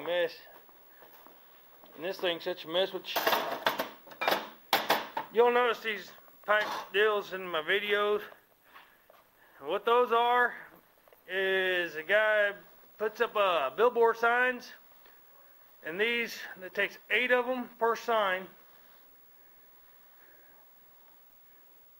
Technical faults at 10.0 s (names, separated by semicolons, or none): call bitrate drop